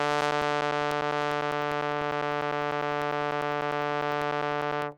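From about 0.11 s to 4.92 s the music has periodic USB or driver dropouts. Every 0.1 s something stalls the bus or driver and a few milliseconds of audio drop to silence, giving a steady ticking, around fifty clicks.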